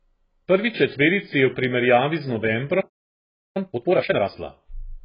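AAC compression runs through the whole clip. Nothing reaches above about 5.1 kHz, so the speech sounds dull and boxed-in, with smeared consonants and a warbling, fizzy edge on sibilants and held vowels. This is likely AAC-LC coding at a very low bitrate, which fits roughly 12 kbps. At that rate the encoder drops the upper band entirely and quantises the remaining frequency lines so coarsely that the spectrum breaks up into holes and substitute noise.

A playback stall follows at 2.80 s, right after "je v primerjavi z". The output goes completely silent for about 0.75 s, until 3.57 s, cutting the speech off mid-flow. The player likely ran out of buffered data or its output thread was held up, leaving nothing to play until it recovered. The gap is long enough to sound like a dropout rather than a natural pause.

Time-compressed catch-up follows from 3.57 s to 4.31 s, directly after the silence. 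The speech plays at twice its normal rate while keeping its pitch, so it sounds rushed rather than chipmunk-like. To work off the backlog built up during the stall, the player cuts out small slices of audio and cross-fades the remaining pieces together, which produces the hurried delivery.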